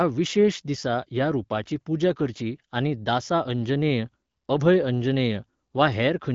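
Nothing stood out on listening to this speech, which carries the typical sound of AMR wideband (HD Voice) coding at 12.65 kbit/s, with nothing above 7.6 kHz.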